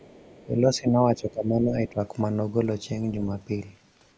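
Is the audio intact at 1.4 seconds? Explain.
No. From 0.46 to 1.99 s the echo canceller likely mistook simultaneous talk for loudspeaker echo and turned the near-end speech down. This speech suppressed in double talk dips by up to about 15 dB, with roughly a second of it affected in pieces.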